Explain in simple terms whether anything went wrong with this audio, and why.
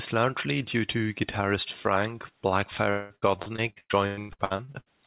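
From 2.9 to 4.88 s the speech turns choppy and robotic: repeated packet loss, with fifteen gaps patched by stretching the previous sound, rather than one single dropout.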